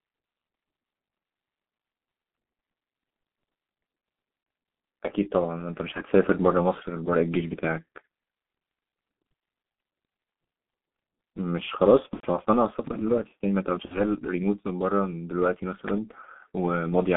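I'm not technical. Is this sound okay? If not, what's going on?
No. The speech has passed through the G.723.1 codec, an old internet-phone voice format. It keeps only roughly 200 Hz to 3.6 kHz and squeezes the voice hard. So everything sounds muffled and hoarse, and consonants blur together throughout.

There is also VoIP packet loss concealed by the speech codec. Pieces of the call went missing: 30 ms at 4.43 s, 90 ms from 12.14 to 12.30 s, and 60 ms from 13.85 to 14.02 s. The decoder filled each gap by guessing, so the voice is stretched out and fades. It stays weak for a moment afterwards.

At 15.88 to 16.00 s there is a loud pop, two sharp clicks in quick succession. They are clearly louder than the speech, which continues underneath. This is likely a plug, a switch or a static discharge.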